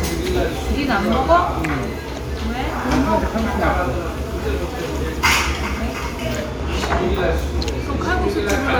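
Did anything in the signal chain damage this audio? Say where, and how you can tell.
No, nothing in the signal chain damaged this audio.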